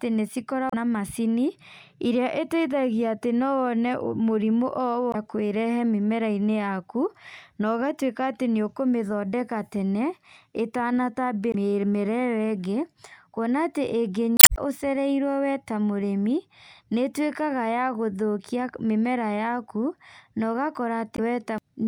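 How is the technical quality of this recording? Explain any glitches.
The recording has five brief glitches, all from damaged data in a compressed stream, at 0.70–0.74, 5.11–5.15, 11.51–11.55, 14.36–14.58 and 21.15–21.19 s. In each, part of the encoded speech arrives corrupted, so the decoder misreads those frames, loses its place and hunts for the next valid frame header. The result is a short chirp, squawk, click or hole of about 40 ms, except at 14.36 s, where it stretches to roughly 230 ms.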